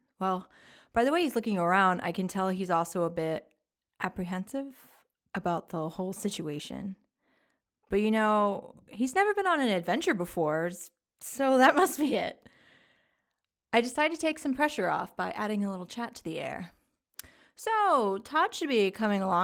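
Speech recording; no technical faults can be heard.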